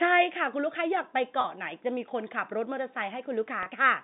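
At 1.41–1.44 s and 3.63–3.66 s, packet loss with pitch repetition bridges a 30 ms gap, fitting one lost packet, by looping the last pitch period. Each sounds like a brief buzzy hold. The waveform shows identical repeated cycles, and the spectrogram shows frozen, evenly spaced harmonics.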